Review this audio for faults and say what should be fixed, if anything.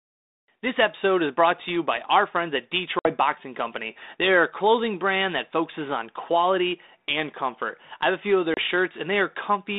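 Packet loss on an ADPCM call at 2.99–3.13 s, after "by our friends at" (60 ms lost), and 8.54–8.59 s, after "have a few of" (30 ms lost). Each shows as a hard-edged blank gap in the waveform and spectrogram. The speech then resumes slightly distorted, because the 32 kbit/s G.726 decoder's predictor and step size must resynchronise. Prevent it with jitter buffering, retransmission or packet loss concealment on the DECT or VoIP link.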